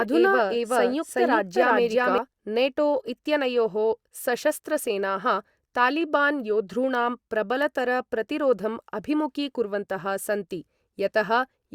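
From the very start until 2.18 s, each stretch of speech is heard twice, a second full-band copy trailing about 0.4 s behind at about the same loudness, with no decay or room colour, then cutting off abruptly just before "नेटो इत्यनयोः सशस्त्रसेनाः तालिबान्". This doubled audio track likely comes from the signal being captured again through a slower path.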